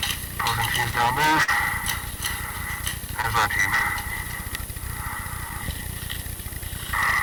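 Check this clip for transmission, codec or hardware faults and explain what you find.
Two problems stand out: hard clipping across the whole clip, and two short dropouts patched over by packet loss concealment.

The hard clipping runs start to finish. The signal is overdriven by about 19 dB, so every peak slams into the ceiling of some stage and gets sliced flat, with something like 7 percent of the samples pinned there. Those squared-off tops throw energy high up the spectrum, so the loud parts come across as a constant harsh fuzz rather than occasional crackle.

There's also short concealed packet loss, twice. Around 1.43 to 1.50 s roughly 40 ms of audio didn't arrive, and the receiver bridged about 43 ms by carrying the preceding sound forward and then crossfading back into the real signal. You hear a brief smeary wobble there. A smaller one hits at about 3.22 to 3.26 s, with roughly 18 ms filled, and it comes through as another brief smear.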